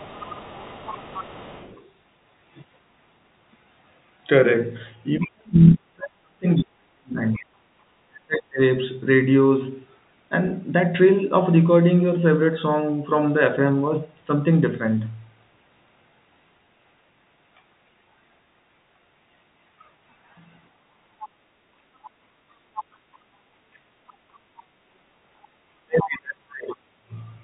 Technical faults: other side's voice leaking through; speech suppressed in double talk; background gated by the echo canceller

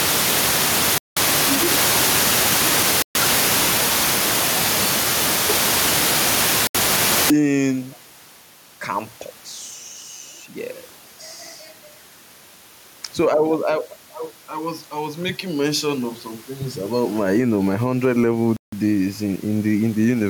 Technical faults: gain pumping; Bluetooth stall

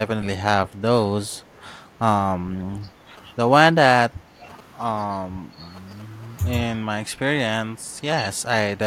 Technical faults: speech suppressed in double talk; echo leak; GSM signalling bursts

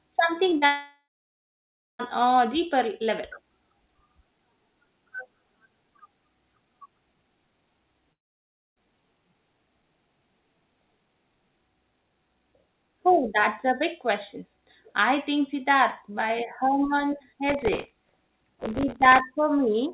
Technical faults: short concealed packet loss; long network dropout; processor overload crackle

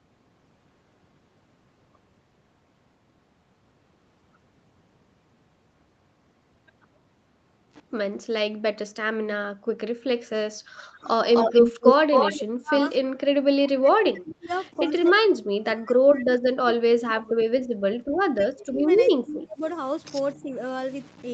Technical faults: speech suppressed in double talk; echo leak

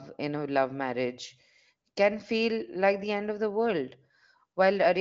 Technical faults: none

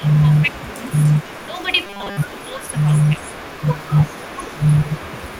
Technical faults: speech suppressed in double talk; echo leak; robotic sound from repeated short buffers

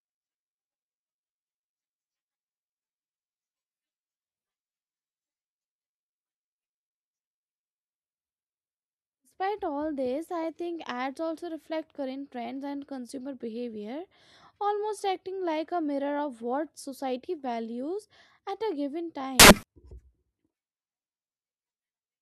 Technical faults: samples built from the wrong bytes

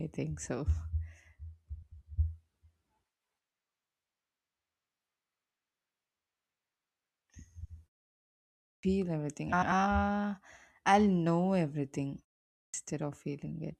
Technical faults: frames out of order; clipped start after a pause

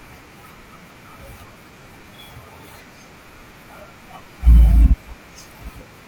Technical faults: AAC frame loss with concealment

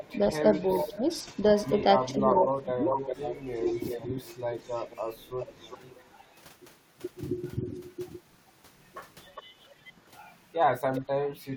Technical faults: echo leak; speech suppressed in double talk

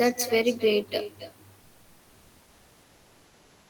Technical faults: echo with no canceller; comfort noise in place of the background

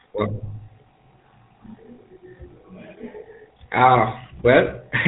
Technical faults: GSM full-rate codec

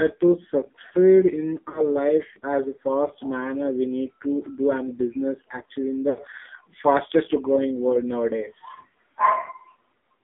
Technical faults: AMR narrowband mobile codec; lost AMR speech frames

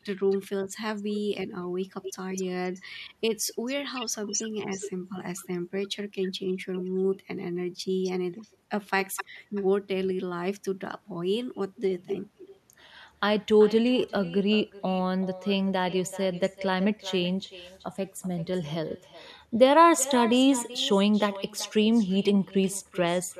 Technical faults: echo with no canceller

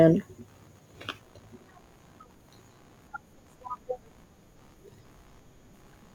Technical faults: computer activity noise

